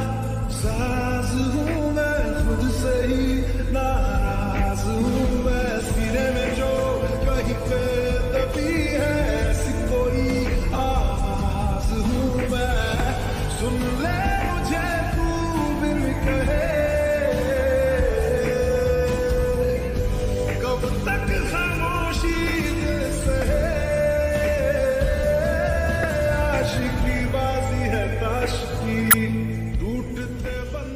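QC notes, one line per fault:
12.99 s, 23.41 s, 26.03 s and 29.10–29.14 s, damaged data in a compressed stream: four brief blips, the first three about 10 to 13 ms long and the last about 34 ms. At each point, part of the encoded stream is corrupted, so the decoder misreads those frames, loses sync and hunts for the next valid frame header. The garbled output during that search is what comes through as a short chirp or squawk.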